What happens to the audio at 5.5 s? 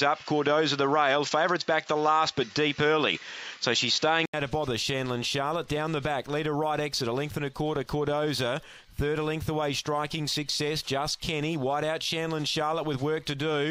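Nothing goes wrong at 5.5 s: the sound continues through that moment with no dropout, click, distortion or other audible fault.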